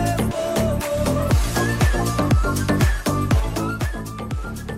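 From 3.32 to 4.06 s, a level drop of roughly 10 dB is applied in unsmoothed 2 dB jumps, about seven a second, so this is zipper noise. Each abrupt gain step leaves a small click, heard as a quick ticking riding on the sound as it fades.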